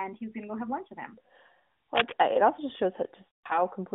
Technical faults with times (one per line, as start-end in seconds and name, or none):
1.95-2.13 cable scratch noise
3.32-3.59 lost AMR speech frames